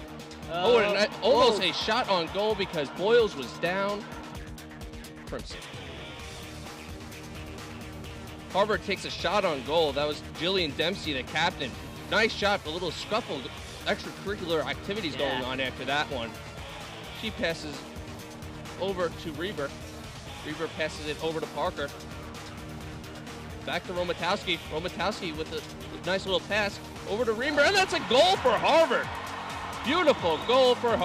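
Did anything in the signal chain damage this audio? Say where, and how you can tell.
Yes, once, at the driver or buffer stage. At 26.69 s there is a small jump in the sound and no gap of silence before it. The likely cause is a dropped buffer (overrun): the capture software fell behind, the hardware overwrote a millisecond or two of samples, and the audio on either side was joined directly. A network or codec loss would more typically leave a gap or a smeared, concealed patch rather than a bare splice.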